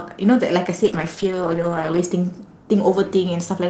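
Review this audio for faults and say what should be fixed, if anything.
A call bitrate drop runs from 0.84 s to 2.31 s. The speech turns rough and watery, and for about 1.17 s at its worst the top end dulls below the 8 kHz band heard elsewhere. That fits the encoder being pushed from 32 kbps down to roughly 9 kbps after the bandwidth estimate fell. Unlike packet loss, nothing drops out or repeats. The audio stays continuous but coarser, then recovers. To prevent it, set a higher minimum bitrate floor for Opus and smooth the bandwidth estimator's reaction to short dips.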